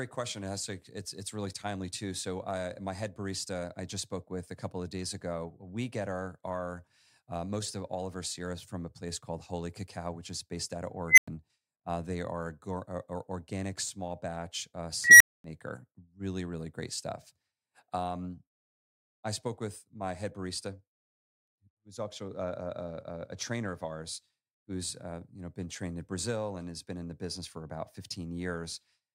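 A speech clip with an unstable filter: after "is based out of" at 11.08 s and "organic small batch uh" at 15.04 s, a roughly 2 kHz squeal swells over 95 and 162 ms, clips, then drops to silence for 100 and 240 ms.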